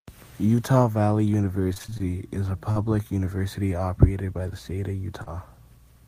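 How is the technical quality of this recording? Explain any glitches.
The recording has three network-style glitches, all in the speech itself.

From 1.73 to 2.01 s, just before "is a", there's repeated packet loss (robotic sound). Dropouts of up to 25 ms keep getting patched, so roughly half that stretch is filler and it comes out choppy and robotic.

Short concealed packet loss happens twice. At 2.71 to 2.77 s, between "is a" and "university operated by the", about 40 ms went missing. Around 5.23 to 5.28 s, after "by the state of", about 20 ms dropped. Each time the receiver extended the previous sound and then blended back, leaving a brief smear.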